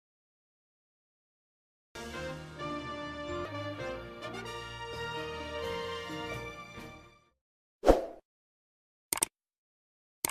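The capture began late, a cut-off start: the opening of the sound was never recorded, leaving digital silence from 0.0 to 1.95 s. At 1.95 s the audio cuts in abruptly mid-sound, with no natural attack or fade-in leading into it.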